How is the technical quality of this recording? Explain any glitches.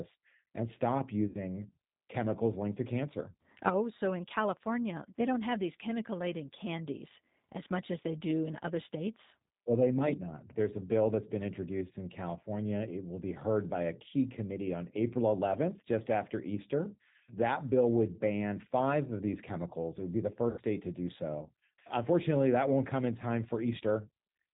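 The speech is intelligible but noticeably coloured by low-rate voice coding, with two brief concealed dropouts. Throughout, G.729 codec damage is plainly audible: rough, slightly synthetic speech with nothing above 4 kHz, consistent with an 8 kbit/s model-based codec. From 1.27 to 1.37 s, after "and stop", and from 20.50 to 20.61 s, between "would be the" and "to do so", VoIP packet loss concealed by the speech codec leaves gaps of about 70 and 80 ms. The decoder extends its last pitch and filter, producing a buzzy tone or coloured noise that fades.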